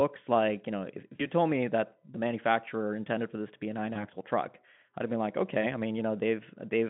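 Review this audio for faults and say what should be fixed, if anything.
VoIP packet loss concealed by the speech codec: packets dropped at 1.15 to 1.29 s (40 ms) and at 3.93 to 4.06 s and 5.61 to 5.65 s (20 ms each). The decoder extrapolated from its last pitch, smearing speech into a fading buzzy tone or coloured noise that stays weak past each gap. Adding forward error correction or a deeper jitter buffer to the Speex link would prevent it.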